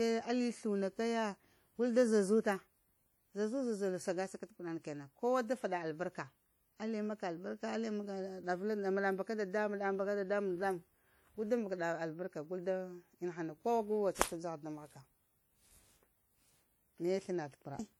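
Speech runs throughout with plainly audible transform-codec damage, likely from WMA compression (the first WMA version), at a rate that fits roughly 48 kbps. Consonants ring and smear, and a washy hiss swells and fades with the speech. On a spectrogram, weak high-frequency detail shows as broken, patchy blocks with gaps where quieter components vanish, and nothing appears above 20.1 kHz. The waveform gives little away, though transients look softened.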